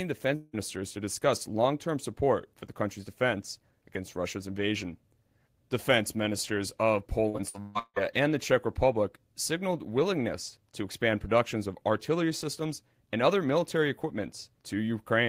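From 0.35 to 0.55 s, just before "to discuss long term", the speech is replaced by a smeared, buzzy continuation of the preceding sound lasting about 0.18 s, with no true silence. This is likely a long network dropout, with about 180 ms of audio lost and concealed.

Between 7.29 and 7.98 s, after "ministers of" and before "and the", repeated packet loss produces choppy, robotic speech. Five separate gaps, the longest 171 ms, were patched by extending the last sound, so about 62% of that stretch is concealment rather than real audio.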